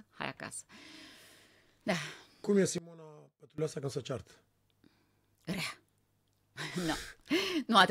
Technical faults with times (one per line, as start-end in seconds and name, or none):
2.78-3.58 one channel inverted